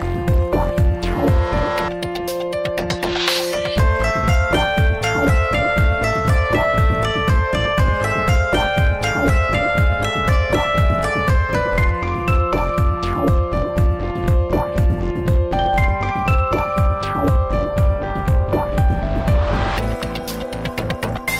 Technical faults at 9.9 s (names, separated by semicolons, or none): hard clipping